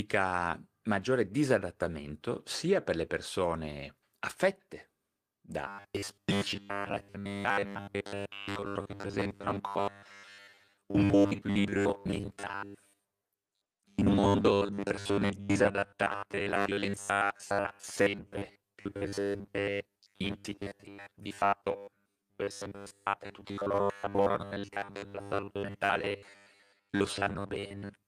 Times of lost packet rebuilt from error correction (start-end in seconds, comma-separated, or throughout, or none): 26.19